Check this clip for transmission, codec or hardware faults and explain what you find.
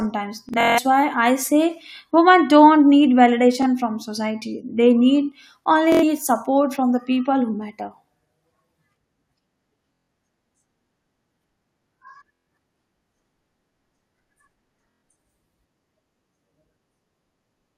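The speech has six bursts of Bluetooth stutter:

0.49 to 0.79 s, before "why I say women". About 209 ms is lost over 0.28 s, with the longest run 163 ms.
3.62 to 3.66 s, before "from society".
5.92 to 6.04 s, between "need only" and "support from the people".
9.94 to 10.08 s.
12.33 to 12.47 s.
14.91 to 15.03 s.

Packets arrived late or not at all, so the receiver looped its last slice, which fits roughly 23 ms packets. Each multi-frame gap is a buzzy machine-gun repeat, and then the speech jumps ahead. The waveform shows identical repeating blocks, and the spectrogram shows evenly spaced vertical striping.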